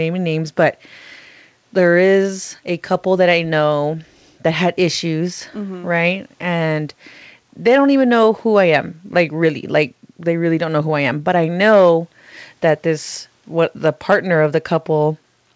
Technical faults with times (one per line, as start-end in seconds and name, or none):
none